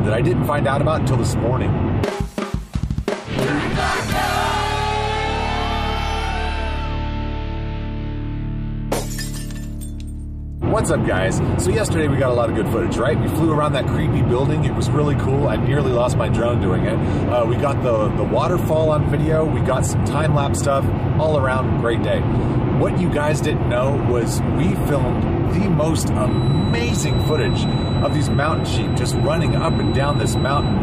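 From 26.21 s to the end at 30.83 s, a feedback whistle sits behind the sound: a thin, steady tone at 4 kHz, around 20 dB below the main signal, swelling and fading slowly in level. The likely cause is a loudspeaker-to-microphone loop running just at the edge of instability, so one frequency keeps recirculating and sustains itself without building into a full howl. It persists until the clip stops.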